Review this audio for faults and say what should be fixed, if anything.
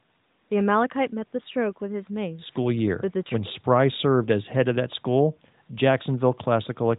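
No faults turn up in this audio, so nothing needs to be fixed.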